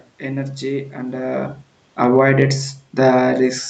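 Just after "energy and", at 1.27 s, automatic gain falling begins. The gain control judged the input too loud, or its background noise too strong, and eases its gain down by about 5 dB until 2.37 s. Unlike the talker shifting around 1 s, the room noise sinks along with the speech.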